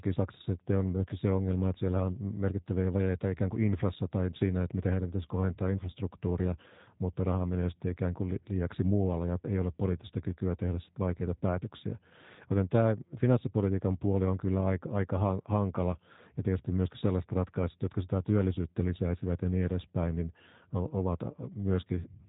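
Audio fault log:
Throughout, G.729 codec: the speech sounds thin, slightly rough and synthetic, with nothing above about 3.8 kHz, and the damage is plainly audible. The codec does not send the waveform. It sends a few parameters per 10 ms frame: a vocal tract filter, a pitch predictor and a handful of pulses, and the decoder rebuilds the speech from these. The coarse pulse excitation gives the buzzy, artificial texture. The narrow band and heavy modelling fit a low-rate G.729A stream at around 8 kbit/s.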